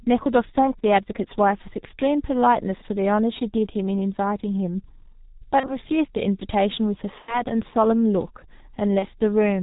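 It's a speech clip run through the G.723.1 codec, and the heavy damage sounds like its 6.3 kbit/s mode: muffled, hoarse, nothing above 4 kHz, smeared consonants. There's also VoIP packet loss concealed by the speech codec at 5.60–5.76, 7.22–7.44 and 8.99–9.05 s. Buzzy or noisy, fading patches that fit one or two lost 30 ms frames, with the voice staying weak or distorted a bit after each.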